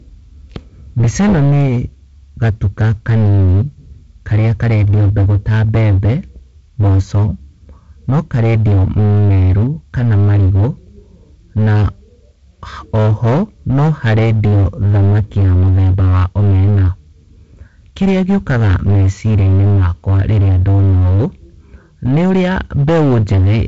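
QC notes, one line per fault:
Throughout, hard clipping. The speech is driven about 14 dB past what the chain can pass, so nearly a third of the samples hit the ceiling and are cut flat. Those squared-off tops add harmonics high up the spectrum. The result is a harsh fuzz on every loud syllable, not just crackle on the odd peak. Nothing is present above 7.7 kHz, the top of the G.722 wideband band.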